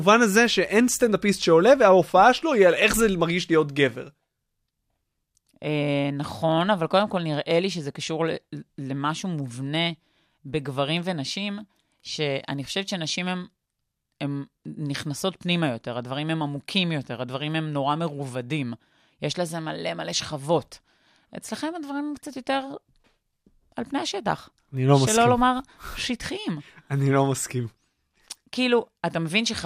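Right at the start, from 0.33 to 1.83 s, there's a burst of mains hum, a steady 60 Hz drone sitting well under the speech, roughly 35 dB down. Power-line energy has leaked into the signal, likely through a ground loop or a nearby transformer.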